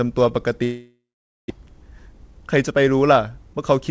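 From 0.64 s to 1.52 s the speech breaks off. The last sound is stretched into a fading buzz, then nearly half a second of silence follows before the speech resumes with about 0.6 s of it simply gone. This is likely a long network dropout. No packets arrived, so the receiver improvised briefly, gave up, and rejoined the stream further on, now roughly a fifth of a second later than before.

A jitter buffer speed-up then runs from 2.06 s to 2.82 s. Backed-up audio is trimmed by cutting out short pitch-period slices, about 50 ms in total, so the speech moves around 7% faster at unchanged pitch. A second, sharper speed-up at 3.39–3.59 s removes about 70 ms at around 134% speed, and there the speech sounds clearly hurried. Throughout, the call codec's band limit applies, with nothing above 8 kHz, consistent with G.722.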